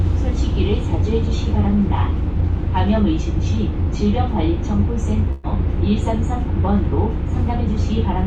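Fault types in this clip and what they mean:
Burst of packet loss: around 5.31 s a short run of audio never arrived in time, so the receiver stretched the last bit of sound for about 120 ms, letting it fade, then jumped ahead. That missing 120 ms is simply gone, with no silent gap.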